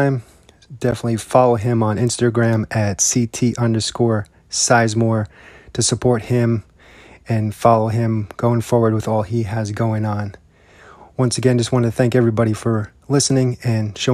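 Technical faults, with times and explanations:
0.91 s, block of digital silence: for about 11.6 ms the speech drops abruptly to silence and then returns, with no fade on either side. Because the waveform is cut off mid-cycle and later resumes at an unrelated level, each edge produces a sharp discontinuity, heard here as a brief tick rather than an audible hole. The length fits a 512-sample buffer that the audio path did not fill in time.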